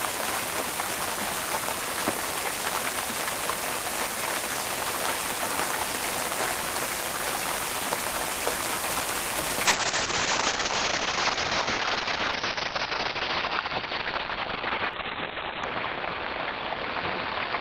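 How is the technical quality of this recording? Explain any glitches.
The second half is degraded. From 9.66 s to the end, a call bitrate drop cuts coding from 32 to 7 kbps and bandwidth from 20 to 4 kHz. The sound turns coarse and muffled.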